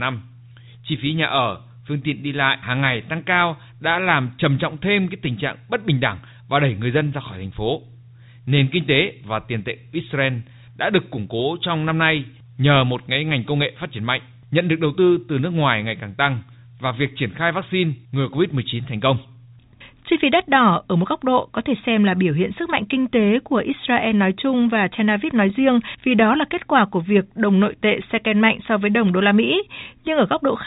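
No faults are present in this speech recording, which has passed through a call path whose sound, with nothing above 4 kHz, fits a G.711 mu-law codec at 64 kbps.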